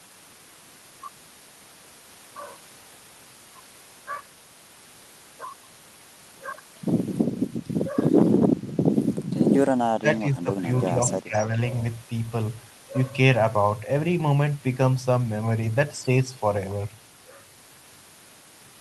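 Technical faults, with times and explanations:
9.95–10.66 s, 10.86–10.91 s and 11.2–11.53 s: speech suppressed in double talk. With both sides likely talking at once, the echo canceller could not tell this talker from loudspeaker echo and turned the signal down. The sound dips by up to about 20 dB.
11.33–11.41 s: echo leak. A loudspeaker echo was likely not fully cancelled, so a brief copy of the sound returns 316 ms late. It sits at about 20 dB below the speech, a faint scrap overlapping the last suppressed stretch.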